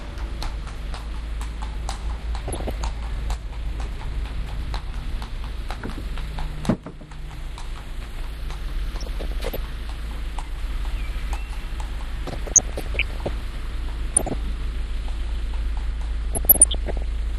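MP2 compression runs through this recording of everyday sounds for its whole length. The audio is dull and carries a gurgling, granular roughness, likely from MPEG Layer II coding at a low rate, which fits a stream of about 80 kbps. Too few bits are shared among the codec's 32 sub-bands, so upper bands switch off and flicker, and the bands that remain are coarsely quantised. DAB burbling appears at 2.48–2.90 s, 8.95–9.58 s, 12.27–13.28 s, 14.12–14.34 s and 16.32–17.02 s. Reception errors at a rate on the order of half a percent slip past error correction into the audio data. Corrupted samples then put short blips of noise into individual sub-bands. The longest burst, around 12.3 s, spans a run of roughly forty frames.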